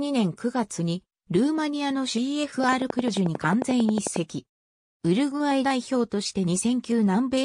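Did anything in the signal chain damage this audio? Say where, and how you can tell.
Yes: a train of clicks runs from 2.64 to 4.17 s, around twenty evenly spaced pulses at 11.1 per second, standing roughly 15 dB above the sound. Their near-identical shape and steady pacing point to likely interference coupling into the analogue wiring or a struggling interface.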